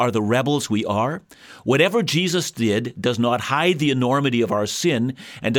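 Nothing in this recording stood out as a technical problem on listening.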